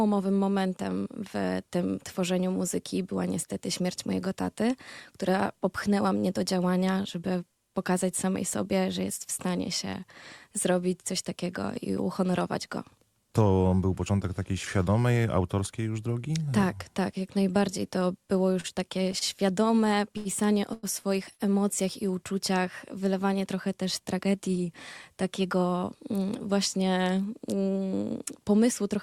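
From 18.53 to 19.23 s there are repeated stalls (stutter). Packets arrived too late to keep the jitter buffer fed, and it ran empty four times. Each time the receiver extended the last sound until data returned, filling 78 ms in total, with the longest gap at 36 ms and about 11% of the span concealed. Nothing is lost, but the audio drags and hiccups. On a spectrogram each fill looks like a short, smeared stretch where the frequency pattern repeats instead of evolving.

Three separate short stalls from a late packet follow, at 20.17 to 20.27 s, 20.73 to 20.85 s and 21.33 to 21.41 s. Each time a packet missed its slot, so the receiver held the current sound for 81, 98 and 64 ms respectively, then resumed where it left off. Each one is a sound sustained too long. In the waveform the cycles repeat without change, and on a spectrogram the harmonics run flat and unchanging for that stretch.

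From 24.15 to 24.41 s a jitter buffer speed-up occurs. The buffer held more audio than its target, so the receiver cut out many tiny pitch-period pieces, removing around 40 ms in total. Playback runs at 112% speed with the pitch unchanged, so this stretch sounds hurried. A spectrogram shows the events squeezed closer together in time, with the same frequencies.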